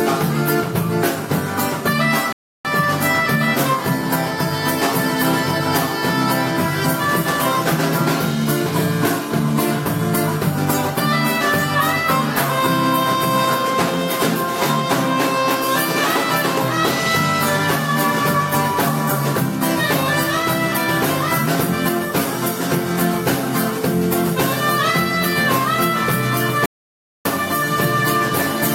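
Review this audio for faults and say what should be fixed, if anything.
Two rebuffering stalls: the sound drops to silence at 2.33–2.65 s and again at 26.66–27.25 s, then picks up exactly where it left off. The player ran dry on downloaded audio, so nothing's lost, but 0.32 s and 0.6 s of dead air get added. A deeper playback buffer or a lower streaming bitrate on shaky connections should keep these from happening.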